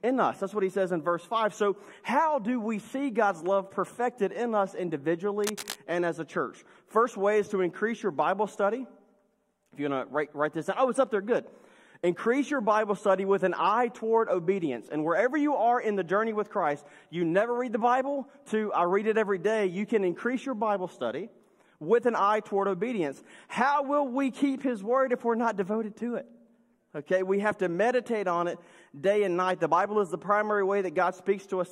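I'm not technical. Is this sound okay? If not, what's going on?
No. From 5.44 to 5.78 seconds there is a burst of cable scratch noise: a fairly loud, rough scratching or rustling over the sound for about a third of a second. The likely cause is a worn cable or connector being moved.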